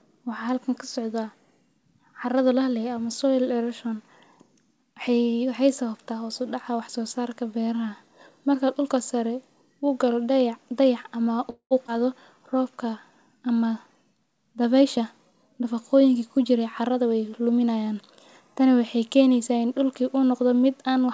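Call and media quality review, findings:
Call audio freeze, 11.50–11.73 s: about 208 ms inserted, the held sound decaying into roughly 90 ms of silence. Nothing is lost; speech resumes exactly where it stopped, unlike a skip. Likely jitter-buffer underrun from delayed packets, with concealment extending the last sound.

Skip ahead, 11.87–11.90 s: abrupt forward jump with only a 10 ms join, roughly 70 ms of speech missing. Unlike the freeze just before, no gap is added; content disappears and the two sides splice almost directly. Audio dropped in transit or discarded by an overflowing jitter buffer.

Jitter buffer slow-down, 12.34–13.12 s: delivery drops to 91% speed, 79 ms stretched in, pitch unchanged. Sounds are drawn out, with a possible slight warble. This is repetition of pitch periods to rebuild the buffer reserve, not a resampling error, since resampling would lower the pitch.

Jitter buffer speed-up, 14.81–17.13 s: speech runs at 109% and sounds hurried over about 2.3 s, with around 200 ms trimmed. 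Pitch holds steady, ruling out a clock or sample-rate mismatch. The buffer is cutting short pitch-period pieces to shed excess delay.

The call path band-limits everything at 8 kHz, consistent with G.722 at 64 kbps.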